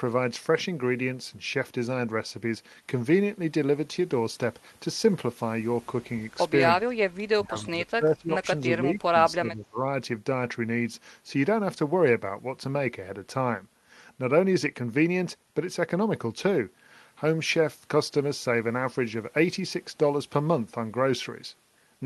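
At 6.88 s the speech drops by roughly 30 dB, recovering at 7.01 s. From 7.34 to 9.16 s it dips again, about 20 dB down, for about a second in all within that span. A third dip runs from 9.35 to 9.78 s, about 25 dB. This is speech suppressed in double talk. It is likely an echo canceller that mistook the talker for loudspeaker echo and turned both down. Throughout, the call codec's band stops near 12 kHz.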